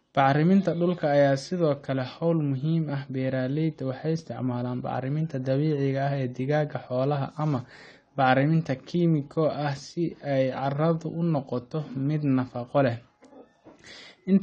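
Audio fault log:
Throughout: AAC compression. The speech has no content above 9 kHz, so sibilants and breath noise lose their top and the sound is dull. Coding damage is plainly audible across the clip. This is likely lossy AAC-LC encoding, with the damage level pointing to a bitrate around 32 kbps. At that rate the encoder lowers its cut-off and quantises the remaining spectrum coarsely against its hearing model, which smears fine detail.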